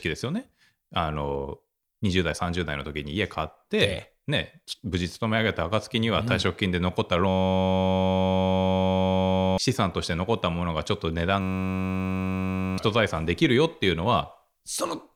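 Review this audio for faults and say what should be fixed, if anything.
Two system hang loops, at 7.29–9.58 s and 11.41–12.78 s: the hardware kept replaying one 10.67 ms buffer, which fits a 512-sample buffer, so you get a steady 93.8 Hz buzz while roughly two seconds and then one and a half seconds of speech go missing. Fix the driver or system stall, and have the audio path output silence instead of recycling a stale buffer when it underruns.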